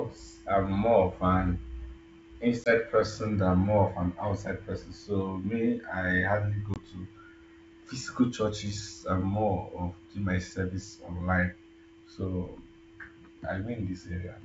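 Packet loss on an ADPCM call hits at 2.64–2.70 s and 6.74–6.77 s. Each time roughly one packet of about 20 ms drops to hard-edged silence, and the decoder's predictor and step size lose track of the sender's. The speech returns with brief distortion before settling.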